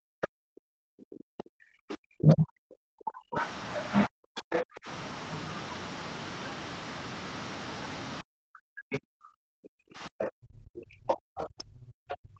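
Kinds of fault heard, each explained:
Speech suppressed in double talk: The talker gets pushed way down, by around 40 dB at the deepest, through the first five seconds or so and again from about 8.2 s to the end. It comes and goes rather than sitting flat, with the voice dipping and chopping. The likely cause is an echo canceller that couldn't tell its own talker from the loudspeaker echo while both sides were talking, so it ducked everything.
Other side's voice leaking through: A second voice sneaks in under the talker in scraps: brief blips near 0.23 s and 8.92 s, a longer patch from about 1.4 to 2.0 s, another around 4.4 to 4.6 s, and a long run from roughly 10.2 to 12.2 s. It ranges from fairly faint to nearly as loud as the talker. The likely cause is loudspeaker playback that the echo canceller didn't fully remove from the mic.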